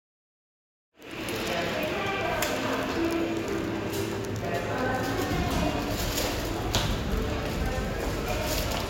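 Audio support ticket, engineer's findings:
No faults found; the audio comes up in a smooth fade-in from around 1 s to 1.42 s with no click or hard edge at the onset, and nothing in the signal calls for action.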